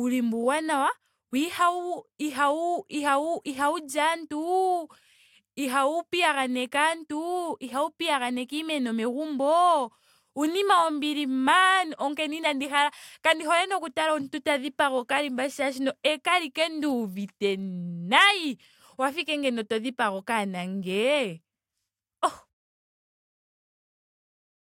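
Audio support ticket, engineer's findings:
Nothing stood out on listening to the speech recording.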